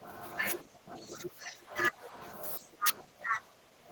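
Speech suppressed in double talk from 0 to 0.21 s, 0.62 to 1.75 s, 1.91 to 2.17 s and 2.34 s to the end: the speech sinks by about 10 to 15 dB, likely because an echo canceller, facing simultaneous talk from both ends, turned down the near talker along with the echo.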